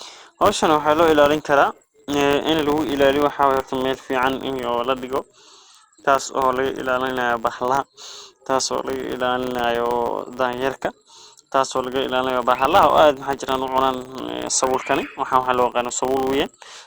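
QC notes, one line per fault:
Throughout, filter restarted on every block: there's a steady 100 Hz buzz riding under the speech, which is what you get when a filter drops its memory at each block boundary and starts again from silence. Each restart throws a tiny transient, and since they land every 10 ms, which fits 10 ms processing blocks, they fuse into a buzz instead of separate ticks. It swells and fades with the speech level.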